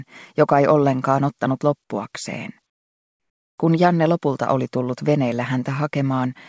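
The audio has passed through a call path, and nothing above 8 kHz remains, which fits a wideband codec such as G.722. From 2.70 to 3.58 s, the real background gives way to comfort noise. For about 0.88 s, a steady, featureless hiss replaces it, about 18 dB quieter. The likely cause is discontinuous transmission: the sender stopped sending during the pause, and the receiver synthesised filler noise.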